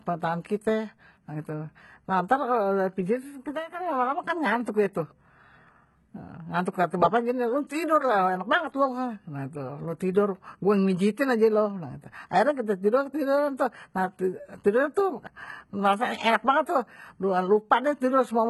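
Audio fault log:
Throughout: likely HE-AAC compression, heavily damaged. The speech treble is synthesized by copying lower bands upward instead of being coded, so s sounds turn gritty and lispy with misaligned harmonics, and nothing comes through above 11.8 kHz. That points to a very low bitrate, around 16 kbps.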